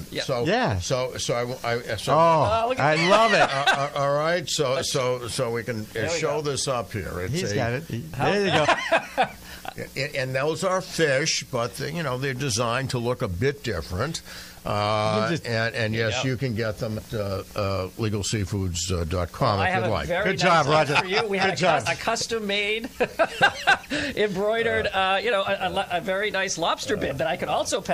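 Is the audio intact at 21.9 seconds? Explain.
No. At 21.85 s, compressed frames are skipped: about four 23.2 ms frames, roughly a tenth of a second, vanish, so the audio jumps ahead at the join.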